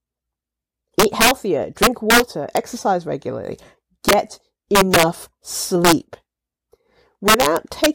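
Integer overflow cracks through the speech at 1.00–1.31, 1.83–2.20, 2.57, 4.09–4.13, 4.75–5.03, 5.85–5.93 and 7.28–7.86 s, with the signal driven up to about 6 dB past full scale. Instead of being held at the limit, peaks wrap around to the opposite extreme, so each overshoot becomes a full-range jump. Clipping flattens peaks into a buzzy grit; here the loud moments break into violent, sharp cracks.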